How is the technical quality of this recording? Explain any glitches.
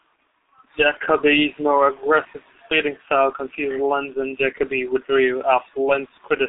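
The technical quality is poor. One fault runs through the whole clip.

G.723.1 codec, throughout: The speech is band-limited to roughly 250 Hz to 3.7 kHz, with nothing above 3.8 kHz. The codec works in coarse 30 ms frames and tracks the voice slowly. That fits a 6.3 kbit/s stream. The speech sounds muffled and hoarse, with smeared consonants.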